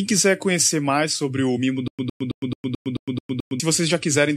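Speech clip with stutter with silent gaps from 1.88 to 3.60 s: a 109 ms fragment repeats eight times, each followed by about 109 ms of digital silence, likely a stalled stream.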